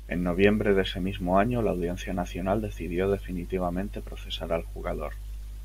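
No technical faults can be heard anywhere in the speech recording, which comes through as a continuous, steady signal with nothing added to or taken from it.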